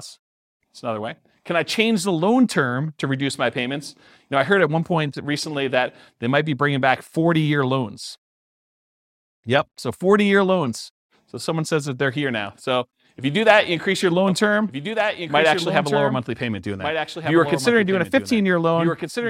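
Speech clip, and from 14.28 s, right after "that you increase your", a doubled audio track kicks in and runs to the end: a clean copy trailing about one and a half seconds behind, roughly 5 dB quieter, starting abruptly. Likely a second capture through a slower path.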